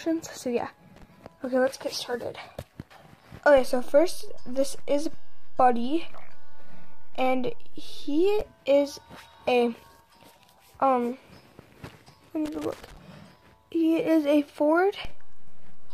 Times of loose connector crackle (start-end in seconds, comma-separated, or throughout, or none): 0.96-1.03, 12.46-12.97